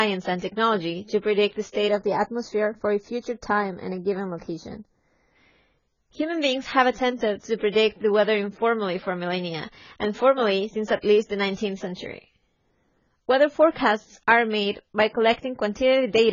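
Across the whole speech clip the top is cut off, with nothing above 7 kHz, and the sound is dull and smeared with heavy damage. This is likely AAC compression, consistent with AAC-LC at around 16 kbps. A spectrogram shows a hard ceiling at 7 kHz and patchy, blocky high bands.

From 1.88 to 5.36 s, channel delay (comb filtering) makes the speech hollow and phasey. One channel lags by roughly 0.15 ms before the mono sum, so shared content cancels at regular intervals. On a spectrogram a dark horizontal notch band sits near 3 kHz.

Pre-echo appears from 7.72 to 7.75 s and again from 11.95 to 11.97 s. Quantisation noise from each loud onset spreads backward across the codec block, about 33 ms and 25 ms respectively. Each attack is heard as a short hiss and then a softened onset. On a waveform or spectrogram this shows as a thin noise smear just before the transient.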